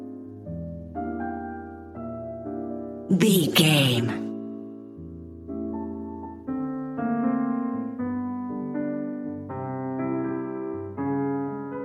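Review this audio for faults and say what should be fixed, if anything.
Nothing here needs fixing; no faults were found.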